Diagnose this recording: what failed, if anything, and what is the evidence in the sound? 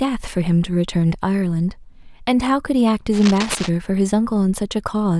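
Analogue wiring stage. From 3.13 to 3.72 s a burst of cable scratch noise rides over the speech: a dense, irregular rustling roughly 10 dB below the signal, lasting about 0.6 s. The uneven, crackling texture suggests a contact whose resistance was fluctuating quickly rather than a steady hum or hiss. The likely cause is a worn connector or cable being flexed during recording, modulating the signal path and injecting these noise bursts.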